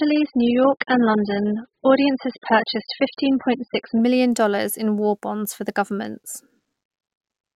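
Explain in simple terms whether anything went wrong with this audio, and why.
For the first 4.0 seconds the speech sounds dull and smeary, with nothing above about 5.1 kHz, then turns crisp with no gap. That is an adaptive stream starting at a low bitrate. A faulty microphone or a permanent filter would stay dull throughout; this jumps up once the player has measured the connection.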